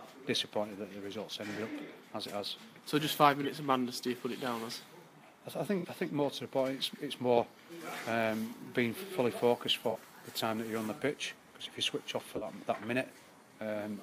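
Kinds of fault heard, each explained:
Corrupt frame concealed: the decoder caught damaged AAC frames and covered them, at four brief spots of about 50 to 110 ms each.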